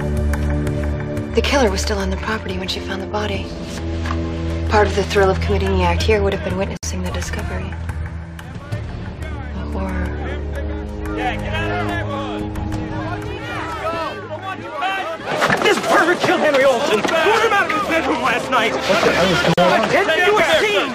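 At 6.77 and 19.54 s there's a gap at a join of encoded pieces, roughly 58 and 42 ms of untrimmed encoder padding, so the sound drops out, then resumes where it stopped.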